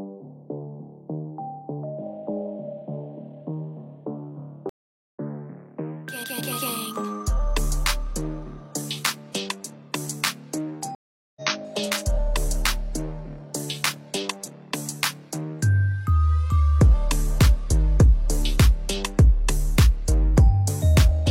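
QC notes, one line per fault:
4.69–5.19 s, stream reconnect: the connection drops for 0.45 s of silence. A fresh decoder then picks up about half a second further along, so audio is skipped.
10.95–11.42 s, stream reconnect: the same break, with 0.41 s of silence. Playback resumes a little under half a second later, so another chunk goes missing.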